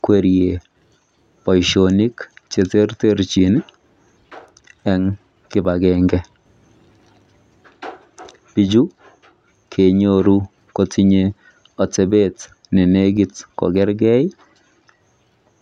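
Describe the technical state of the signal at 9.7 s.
At 9.7 s the speech signal is intact, with no audible technical fault at that moment.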